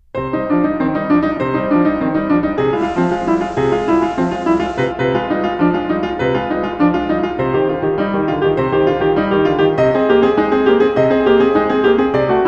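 A piece of music in which the receiver performs a digital radio blend to analogue FM from 2.74 s to 4.94 s: the digital stream drops out and a 112 ms crossfade swaps in the FM broadcast, then returns. Over that stretch hiss rises to around 30 dB below the music, and level shifts by about 1 dB. A spectrogram shows a faint noise floor filling gaps; the waveform shows a slight step in level.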